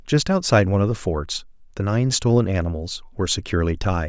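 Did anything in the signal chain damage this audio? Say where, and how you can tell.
No, nothing in the signal chain damaged this audio.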